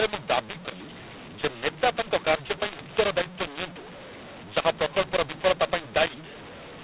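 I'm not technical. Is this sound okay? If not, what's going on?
No. This is mu-law and A-law mixed up: the telephone speech was stored in the mu-law format but read back as A-law, scrambling loudness levels from start to finish. Speech sounds harsh and distorted, and pauses fill with hiss instead of silence.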